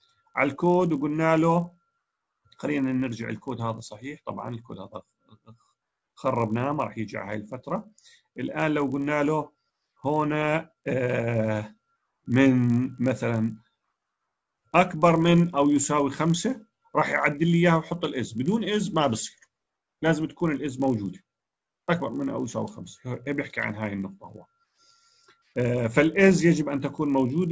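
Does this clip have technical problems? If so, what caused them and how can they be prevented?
Yes. The resampler restarted on every block, throughout the clip. The 24 kHz to 16 kHz conversion ran on 20 ms blocks separately, so each edge carries a small error. This yields a 50 Hz buzz heard only with signal. Prevent it by keeping resampler state across blocks.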